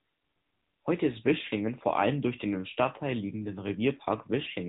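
Speech heard through an AMR narrowband mobile codec for the whole clip: nothing passes above about 3.8 kHz, and the voice has a plainly buzzy, synthetic edge, which fits a mid-rate mode near 10 kbps. That coded texture, not just the missing highs, separates it from simple telephone band-limiting.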